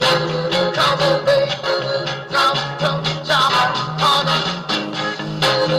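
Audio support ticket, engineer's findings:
Skip ahead at 1.63 to 1.65 s. Playback jumps forward with no gap. Roughly 0.4 s of audio missing, both sides spliced directly. Probable jitter buffer overflow or in-transit loss, dropping queued audio and pulling playout delay in by the same amount.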